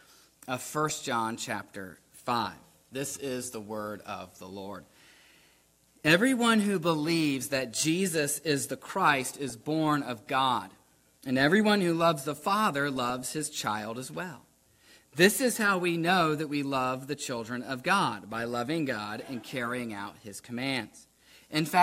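DAB burbling appears at 9.25–9.55 s and 12.96–13.69 s: bit errors from weak reception slip past error correction, corrupting sub-bands into short noise blips over the audio, suggesting an error rate of a few tenths of a percent.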